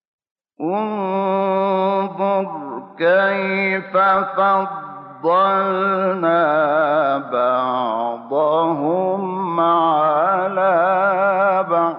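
Across the whole clip the sound is dull and muffled, with a granular, gurgling roughness and upper bands that flicker in and out. This is likely MP2 compression: MPEG Layer II spreads too few bits over its 32 sub-bands, so the highest bands drop out entirely and those that remain are coarsely quantised. The damage level fits a rate around 80 kbps. It is steady and evenly spread, which separates it from the brief bursts of transmission errors.

From 4.09 to 4.18 s there is a short DAB burbling event: short blips of noise sitting on top of the audio in single sub-bands. Corrupted bits have slipped past error correction, so wrong samples are decoded for a handful of frames. The length suggests about five frames, consistent with a bit error rate of around a tenth of a percent. Unlike the constant codec dullness, it is sudden and isolated.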